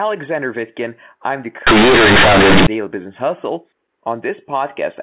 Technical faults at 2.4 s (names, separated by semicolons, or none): companded audio read as linear